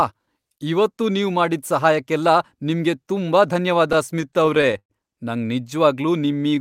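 From 3.87 to 4.92 s, just after "ಮಾಡಿದ್ದ್ ಸಹಾಯಕ್ಕೆಲ್ಲ ನಿಮ್ಗೆ ತುಂಬಾ", the speech falls into repeated stalls (stutter). Packets kept arriving late, so the jitter buffer kept running dry, and each time the receiver held the last sound until audio resumed. There are more than a dozen halts, the longest 110 ms, together about 263 ms, a quarter of that second. Nothing is lost, but the flow jerks stop-start, the longer holds fading out, rather than sounding evenly stretched.

From 6.06 to 6.56 s comes a jitter buffer slow-down. With its reserve running low, the receiver rebuilt it by repeating single pitch periods, adding 81 ms and running the passage at 85 % speed. Unlike the stutter, there are no halts or held fragments: the speech simply drags smoothly with drawn-out sounds. The pitch stays put, which tells it apart from a sample-rate slip that would lower it.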